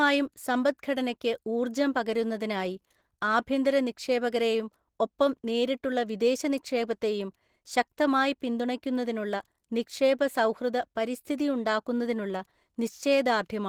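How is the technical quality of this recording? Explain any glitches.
Plainly audible codec damage runs throughout the speech, most likely from Opus compression in its hybrid speech mode at a low rate that fits roughly 16 kbps. Short of bits, the encoder fills bands with noise, leaving the speech hoarse, grainy and somewhat muffled from start to finish.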